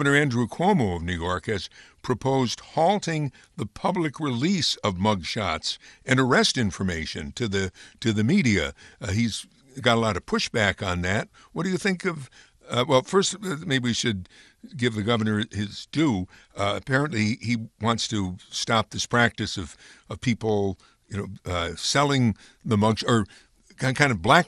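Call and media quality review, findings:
Dull, band-limited speech with gurgling, granular distortion, throughout. Likely MP2 compression: starved Layer II sub-bands drop upper bands, which flicker in and out, and coarsely quantise those remaining. Damage level fits a roughly 80 kbps MP2 stream.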